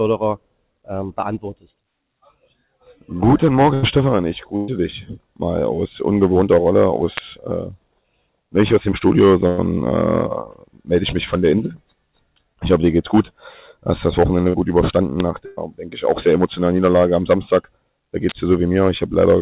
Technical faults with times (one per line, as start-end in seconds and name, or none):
3.74-3.84 burst of packet loss
4.56-4.70 burst of packet loss
7.17 electrical switching spike
9.48-9.60 burst of packet loss
14.50-14.56 short concealed packet loss
15.20 electrical switching spike
15.46-15.59 burst of packet loss
18.29-18.32 electrical switching spike